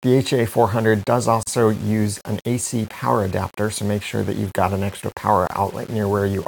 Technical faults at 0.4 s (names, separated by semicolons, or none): low bit depth without dither